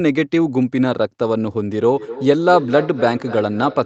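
Feedback echo between two devices begins at 1.84 s and continues to the end. A second device's loudspeaker output re-enters the first device's microphone, beyond either echo canceller's reach, so the speech returns roughly every third of a second, thin and ringing, peaking about 13 dB below the speech.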